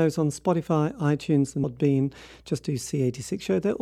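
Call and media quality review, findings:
Damaged data in a compressed stream at 1.63 s: short blip in the speech. Decoder loses frame sync and searches for the next frame header; spectrogram shows a brief broadband smear, waveform a discontinuity.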